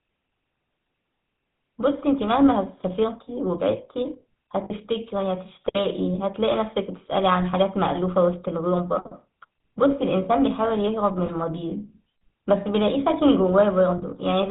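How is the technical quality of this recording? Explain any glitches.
The quality is poor: the speech has been through a heavily compressed phone codec throughout, with three short dropouts near the middle and end.

GSM full-rate codec, throughout the clip: the coder models the vocal tract and drives it with a sparse, regularly spaced pulse train, and its output is limited to the band below 4 kHz. The codec damage is plainly audible as a buzzy, gravelly roughness over the whole voice, along with a muffled, band-limited top end. This fits GSM full rate at 13 kbps.

Lost GSM frames, at 4.64 to 4.72 s, 11.26 to 11.29 s and 13.98 to 14.03 s: when frames fail, the decoder repeats the last good frame's settings instead of inserting silence. Each gap is therefore held as a brief, rough metallic ring. The missing audio runs about 60 ms at the first point, 20 ms at the second and 40 ms at the third, which fits a loss of three, one and two 20 ms frames. 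None is long enough to fade fully to silence.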